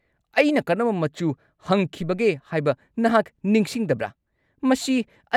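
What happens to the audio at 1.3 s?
Nothing goes wrong at 1.3 s: the speech carries straight through that moment intact, with no dropout, click or distortion.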